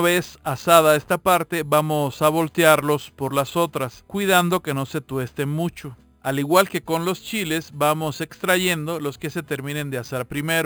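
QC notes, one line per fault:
Throughout: imaging from sample-and-hold upsampling. Each sample was repeated without smoothing, which points to an 11 kHz source raised to 48 kHz. A mirrored copy fills roughly 5.5 to 11 kHz at about 16 dB below the signal, heard as metallic fizz tracking the level.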